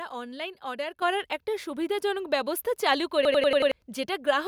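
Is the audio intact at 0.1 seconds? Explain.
Yes, the speech at 0.1 seconds is intact, with no dropout, click, distortion or other technical fault at that moment.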